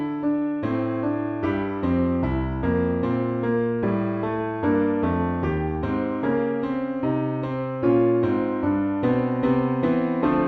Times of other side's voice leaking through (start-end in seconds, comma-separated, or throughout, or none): none